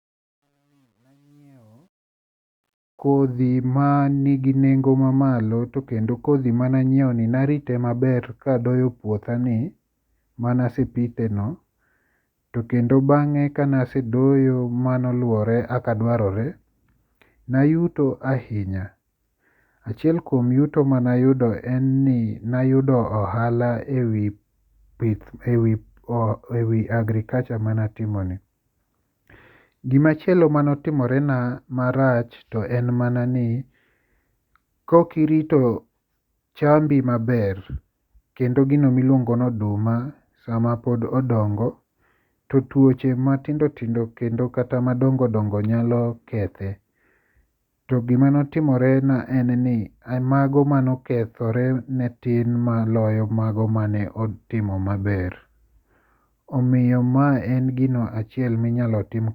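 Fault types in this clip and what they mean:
Truncation distortion on a fade: from 0.00 to 3.40 s, during the fade-in before "manigi nengo mamalo to", the gain stage discards low-order bits without dither, consistent with about 11-bit resolution. The quiet speech becomes coarse steps and sounds gritty, worst until 2.09 s.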